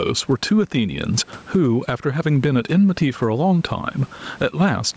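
Gain pumping runs through the whole speech clip. The level swings by roughly 15 dB, and loud and soft parts end up closer in level. The likely cause is input gain set far too high, with a fast limiter pulling the level down on every loud sound. Unlike a noise gate, which cuts the gaps to silence, this fault makes the gaps louder and squashes the speech.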